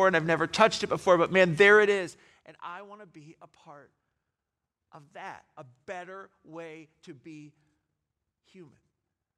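From 1.72 to 2.46 s the speech level drops by roughly 25 dB with zipper noise: the gain falls in unsmoothed 1 dB steps, about thirty per second, and each jump leaves a small click, producing an audible ticking that rides on the fade.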